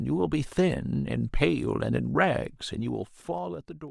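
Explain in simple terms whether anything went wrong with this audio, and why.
Something did go wrong near the end. From about 2.64 s to 3.9 s, the speech gets noticeably quieter, but instead of fading smoothly it drops in small separate steps, roughly seven each second. Each jump in volume makes a tiny click, and together those clicks form a ticking or zipping sound over the voice. This is called zipper noise. It happens when a volume change is applied in coarse chunks with no smoothing between them.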